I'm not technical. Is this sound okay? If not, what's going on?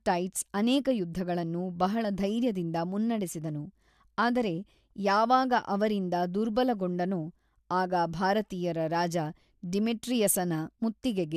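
Yes, this recording of speech sounds fine. There is nothing here that needs fixing.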